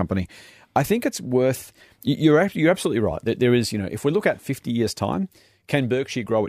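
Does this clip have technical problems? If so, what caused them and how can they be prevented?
Yes. Sample clock jitter runs through the whole speech clip: the converter's clock wanders by a few tenths of a microsecond, so the timing errors add a hissy roughness roughly 50 dB below the speech that rides loud, bright sounds and drops out in pauses. A clean, low-jitter clock source prevents it.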